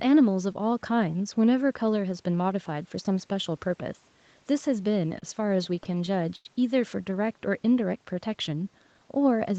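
Packets reaching the receiver of this speech clip arrived late or too slowly between 5.19 and 6.47 s, so its jitter buffer kept running dry, giving repeated stalls (stutter). In about ten short gaps, the longest around 91 ms, the receiver stretched the last sound to fill roughly 196 ms (about 15% of that stretch). Nothing is lost, but the speech drags and stumbles. From 7.25 to 7.57 s the buffer was low or had just raised its target delay, and the receiver rebuilt its reserve through a jitter buffer slow-down, repeating single pitch periods or bits of pauses to add about 36 ms. That passage plays at about 91% speed with unchanged pitch and sounds drawn out. Throughout, the band stops at 8 kHz, which fits a wideband call codec setting.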